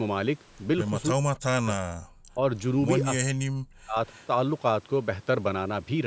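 Speech, processed by a call's microphone chain, with no content above 8 kHz. Speech suppressed in double talk occurs from 1.14 to 2.03 s, 2.31 to 2.42 s and 3.21 to 3.96 s. The talker dips by as much as about 40 dB or breaks into fragments, likely because an echo canceller could not separate this side's talk from the simultaneous far-end loudspeaker echo and turned both down. A waveform shows the envelope collapsing in those spans, and a spectrogram shows gaps or thinned upper bands. An echo leak follows at 4.08 to 4.27 s. A faint copy of the voice, about 30 dB down and delayed by 277 ms, comes back, likely residual loudspeaker pickup that escaped cancellation. On a spectrogram it appears as weak, displaced harmonic traces.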